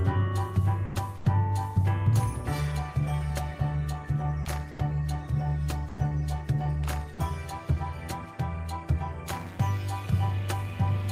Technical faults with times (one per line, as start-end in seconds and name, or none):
0.85-0.95 sound dropped by the voice detector
1.17-1.25 comfort noise in place of the background
4.43 sound dropped by the voice detector
4.71-4.78 sound dropped by the voice detector
5.88-5.98 sound dropped by the voice detector